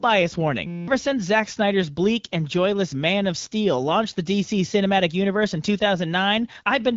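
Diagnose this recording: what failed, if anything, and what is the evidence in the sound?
A system hang loop at the driver or buffer stage, 0.67 to 0.88 s. A steady 172 Hz buzz replaces the speech. The driver froze while the hardware replayed one 5.8 ms slice, fitting a 256-sample buffer. About a fifth of a second is lost.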